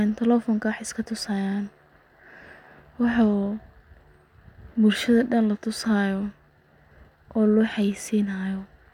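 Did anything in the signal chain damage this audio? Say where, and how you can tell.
No, nothing in this speech recording stood out as a problem on listening.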